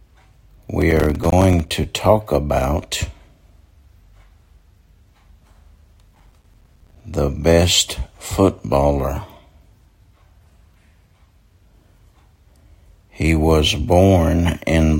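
From 0.82 to 1.70 s, and again from 6.15 to 7.01 s, there's a burst of processor overload crackle. The machine couldn't keep up, so it kept missing its deadlines for short buffers, and each miss dropped a brief hole of silence into the sound. The holes are short and frequent, which fits buffers of about 5 ms with a few dozen missed per burst. Together they come across as gritty tearing laid over the sound, which stops once the load passes.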